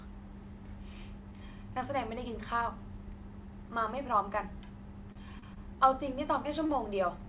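Brief held sounds, each a slight smeared buzz or dip, come at 5.12 to 5.18 s, 5.39 to 5.45 s, 5.54 to 5.60 s and 6.66 to 6.72 s. These are short stalls from a late packet. Each time, a packet missed its slot, the jitter buffer emptied, and the receiver stretched the last sound by 34, 29, 21 and 35 ms before carrying on from the same point, so nothing is lost. Audio stops near 4 kHz throughout, which fits G.711 mu-law on the call path.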